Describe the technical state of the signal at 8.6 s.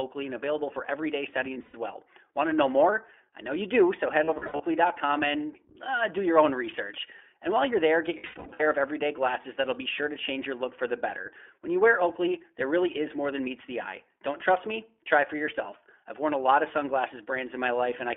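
At 8.6 s the speech is inside a burst of lost iLBC frames running from 8.18 to 8.68 s, between "while you're there get" and "of everyday glasses that'll". About 360 ms of audio is missing, scattered over roughly half a second, with the longest gap around a tenth of a second. That fits a 20 ms frame size. The decoder fills each hole by repeating the last pitch cycle mixed with noise, so the gaps sound like held, buzzy, breathy vowels. On a spectrogram these show as flat, frozen harmonic stripes. On the waveform they appear as repeating, noise-mixed cycles whose envelope fades.

Underneath, the whole signal passes through the iLBC codec, and its coding damage is plainly audible as a rough, synthetic edge. A spectrogram shows energy confined to a telephone band of about 300 Hz to 3.4 kHz, with nothing above it.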